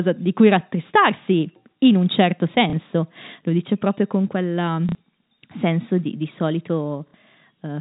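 A small blip comes at 2.70 s (30 ms), and short robotic stutters come at 4.89 s (60 ms) and 7.08 s (60 ms). This is packet loss with the last packet repeated: the receiver replayed old audio out of step with the pitch. The gap lengths fit 30 ms packets.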